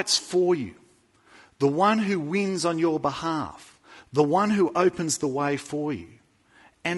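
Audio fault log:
throughout, low-delay AAC compression: speech sounds plainly rough and grainy, likely from AAC-ELD's short frames resolving pitch harmonics poorly, which fits a bitrate near 32 kbps.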